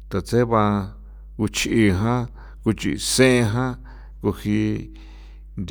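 From start to finish there's mains hum, a steady 50 Hz drone sitting roughly 20 dB under the speech, probably a ground loop or nearby transformer bleeding in.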